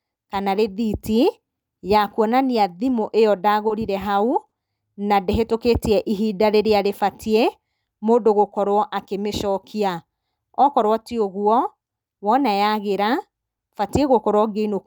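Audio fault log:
3.67 s: short stall from a late packet. A packet came late and the jitter buffer ran dry, so the receiver stretched the last sound by about 20 ms. Nothing is lost. The sound just holds slightly too long, with a faint buzz or dip.
4.48 s: short stall from a late packet, just before "na ndĩhĩtũkĩtie ihinda rĩrĩa". This time the held sound fills 40 ms until the packet arrives. The speech then resumes where it stopped, about 40 ms later than before.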